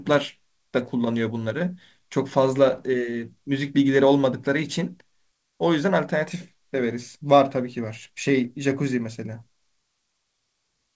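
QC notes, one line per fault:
Nothing to flag here; the speech has come over a call path, and the way everything stops at 8 kHz fits a wideband codec such as G.722 at 64 kbps, which is just how that route sounds.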